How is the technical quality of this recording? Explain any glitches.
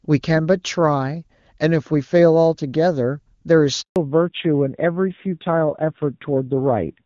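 The call starts out as clean wideband speech, with only faint coding effects from the HD Voice link, then is broken by a brief dropout and a permanent loss of bandwidth.

Handover gap: from 3.82 to 3.96 s the speech fades out within a few tens of milliseconds and goes silent for 140 ms. The phone was switching networks, no speech frames arrived during the switch, and whatever was said in that moment is gone.

Fallback to narrowband: from 3.96 s to the end the speech turns duller and rougher, with nothing above 4 kHz. After the handover the call dropped from AMR-WB HD Voice to the older AMR-NB codec, and the rasp fits a low rate of about 7.4 kbit/s.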